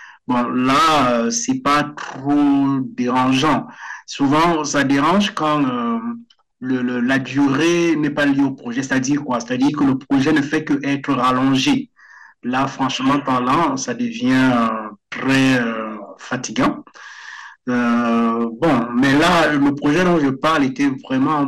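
From start to finish the speech carries a harsh, buzzing fuzz on every loud syllable, with crackle riding the peaks. This is hard clipping: the signal is driven about 14 dB past what the chain can pass, so roughly a tenth of the waveform is sliced flat, spraying harmonics high up the spectrum.

Running underneath for the whole clip is a dull, muffled tone with a gurgling, granular texture, where upper frequencies seem to drop in and out. The likely cause is MP2 compression starved of bits, consistent with a rate near 80 kbps, leaving high sub-bands switched off and the rest coarsely quantised.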